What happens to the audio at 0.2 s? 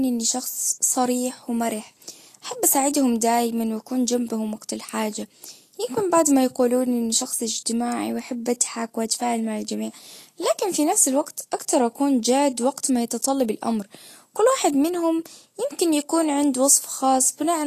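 At 0.2 s the speech already carries the damage of Vorbis compression, which runs through the whole clip rather than starting there. Nothing sounds above 14.2 kHz, and the treble below that edge is hissy and grainy, with roughened tones and softened attacks. The likely cause is coarse quantisation of fine detail into noise-like residue, which fits a low bitrate near 37 kbps. A plain low-pass filter would dull the sound without adding that grain.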